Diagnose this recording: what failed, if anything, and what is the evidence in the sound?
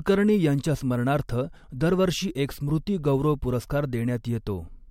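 Nothing failed along the way here, and I can't hear anything wrong with the speech at any stage of the chain, from capture through to playback.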